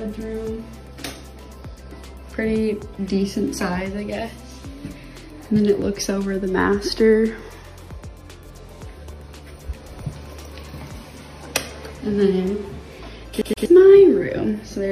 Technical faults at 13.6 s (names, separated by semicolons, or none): CD stuck on one turn